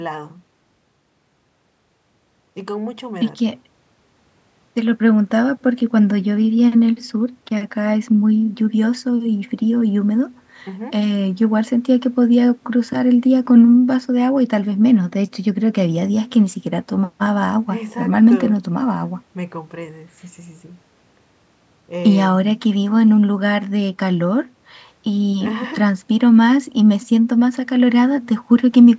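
No technical faults occur in this speech recording, so there are none to describe in time order.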